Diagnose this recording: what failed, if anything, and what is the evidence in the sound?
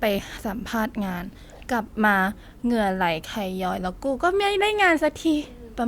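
Nothing in the recording points to a failure at any stage, as the speech signal stays continuous and stable throughout with no audible disturbance.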